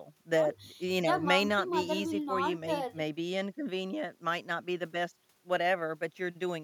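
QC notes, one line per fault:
The signal holds steady from beginning to end, with level, timing and bandwidth consistent across the speech and no technical disturbance to the audio path at any point.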